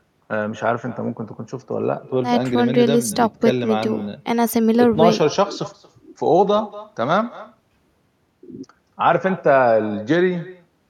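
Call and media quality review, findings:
Echo with no canceller, throughout the speech. Each phrase is followed about a fifth of a second later by a thinner copy, about 19 dB down. Far-end loudspeaker audio is re-captured by its mic and returned over the network, with no echo cancellation active.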